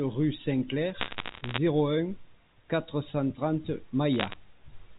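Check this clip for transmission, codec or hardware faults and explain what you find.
There are two bursts of bit errors on a digital phone line, from 1.00 to 1.58 s and again from 4.14 to 4.36 s. Scattered flipped bits, under one percent, each knock out a single sample, so hits on the sign or high bits give sharp ticks that add up to crackle over otherwise unchanged speech on a G.711 A-law path.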